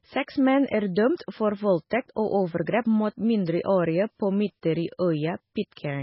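Throughout the speech the audio sounds watery and swirly, with a dull top end that stops dead at about 5.6 kHz and blurred, smeared consonant onsets. The damage is heavy and is likely MP3 compression at a very low bitrate, which fits roughly 16 kbps. Starved of bits, the encoder removed the treble at a fixed cut-off and discarded quieter frequency components, which flicker in and out from frame to frame and produce the swirling texture.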